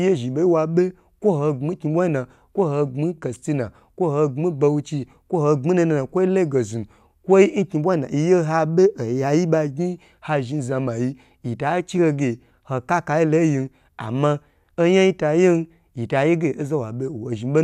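No technical faults can be heard anywhere in this speech recording.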